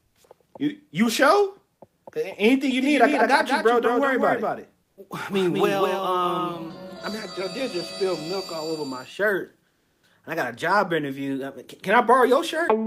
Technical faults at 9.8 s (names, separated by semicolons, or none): comfort noise in place of the background